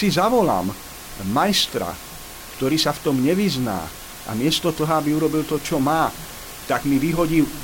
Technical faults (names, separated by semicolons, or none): none